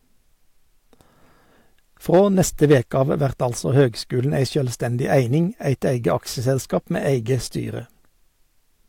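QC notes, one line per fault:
2.14–3.02 s, hard clipping: peaks are driven about 4 dB past full scale just before "av vert altså høgskulen", so the speech peaks are squared off flat. The cut tops add high harmonics, heard as crackle on the peaks.
3.78–3.82 s, hard clipping: a brief overload of about 1 dB between "av vert altså" and "høgskulen ei sjølvstendig eining" flattens only the highest peaks, leaving a short crackle.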